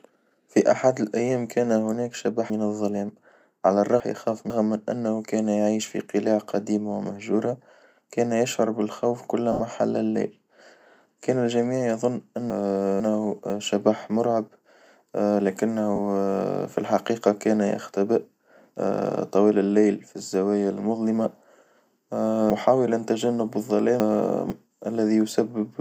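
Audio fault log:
2.5–4.5 s, 12.5–13.5 s and 22.5–24.5 s, chunks out of order: jumbled speech. A half-second chunk plays late, three chunks late after "أحد الأيام كان هناك" before "من إنه كان يعيش", one chunk late before "شبح مرعب", and three chunks late near the end.
9.52–9.60 s and 15.96–15.99 s, lost LE Audio frames: a brief noisy smear after "ومهجورة كان يشعر بالخوف" before "حل الليل", and again later. Missing frames, which fits about eight and two 10 ms frames, were filled from the last spectrum with scrambled signs, likely within LC3 decoding.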